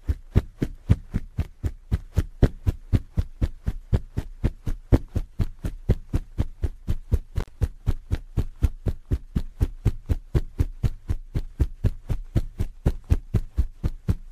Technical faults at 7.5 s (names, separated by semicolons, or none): intermittent contact